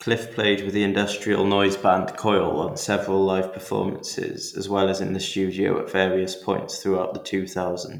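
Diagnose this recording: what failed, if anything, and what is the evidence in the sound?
Nothing failed in this speech recording. No stage of the chain leaves evidence of a fault in the sound, so there is no mechanism to trace.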